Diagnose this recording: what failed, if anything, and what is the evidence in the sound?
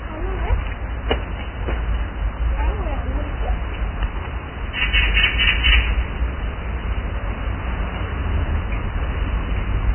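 Codec stage, likely heavy Vorbis compression: the whole clip stops at 3.1 kHz, with a grainy, hissy top end and smeared attacks, pointing to roughly 10 kbps.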